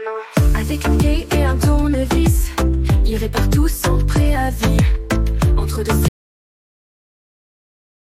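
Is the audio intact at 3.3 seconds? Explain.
Yes, the audio is intact at 3.3 seconds, with nothing at that moment that breaks or disturbs the sound.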